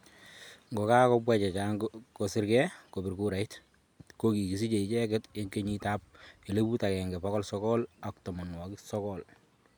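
No technical faults can be heard anywhere in this speech recording.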